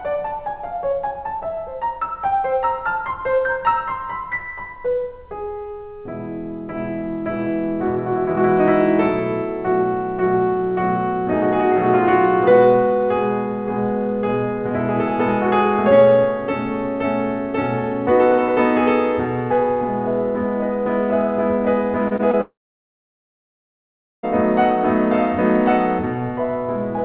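Around 22.08 to 22.23 s the music hits a short concealed packet loss, with another overlapping at 22.16 to 22.21 s and a third at 22.31 to 22.35 s. Each gap of about 20 ms gets patched by stretching the last bit of sound, so you hear quick smeary wobbles and a tiny skip.

Right after, from 22.41 to 24.25 s, there's a long network dropout. The last sound trails on briefly as a fading buzz or hiss, then about 1.7 s of near-silence before the music picks up further along, with that stretch simply gone. Lost packets are the likely cause. All of it sits on the narrow, telephone-like band of the call path, with nothing above 4 kHz, which fits G.711 A-law at 64 kbps.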